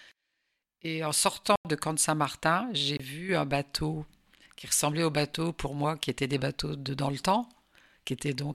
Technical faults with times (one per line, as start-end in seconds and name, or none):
1.56-1.65 block of digital silence
2.97-3.00 block of digital silence